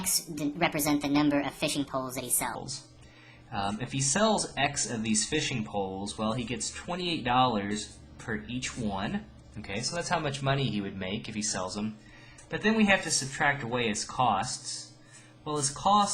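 The opening of the audio, from 0.00 to 2.55 s, is a section at the wrong speed: it runs quick and bright, hurried and raised in pitch by about five semitones, before dropping back to its natural rate and register. Speed and pitch shift together, at 1.36 times the correct rate, which likely comes from that stretch being played back or edited against the wrong clock rather than the one it was recorded at.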